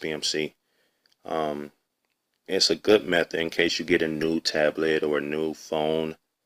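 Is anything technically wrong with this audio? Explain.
Yes, there is a call bitrate drop from 2.66 s to 5.29 s. The sound goes rough and watery, with its top end muffled, for about 2.5 s before it clears. The encoder was forced onto far fewer bits, which fits a fall from around 96 kbps to about 23 kbps. It quantises more coarsely and discards high frequencies. On a spectrogram, the upper band is cut off abruptly across that span. The waveform changes little in level.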